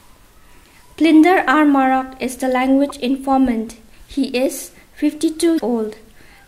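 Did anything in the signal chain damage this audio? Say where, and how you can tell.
Yes, damaged data in a compressed stream at the codec stage: short blips at 2.89 to 2.91 s and 5.56 to 5.60 s. Corrupted frames throw the decoder out of sync until it finds the next header, leaving brief broadband smears on the spectrogram and abrupt discontinuities in the waveform.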